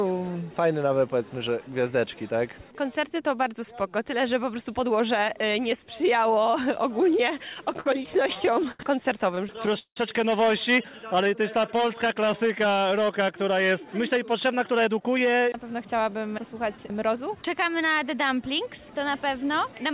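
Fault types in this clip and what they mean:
Repeated stalls (stutter): the audio hitches and drags from 7.54 to 8.80 s and 9.35 to 9.97 s, with gaps up to 176 ms filled because the jitter buffer ran dry.
Jitter buffer slow-down: from 11.07 to 12.27 s the sound runs at 94% speed with unchanged pitch, as repeated pitch periods add 79 ms to rebuild buffer reserve.
Jitter buffer speed-up: between 14.16 and 17.44 s the audio runs hurried at 107% speed, same pitch, as about a fifth of a second is trimmed to cut excess delay.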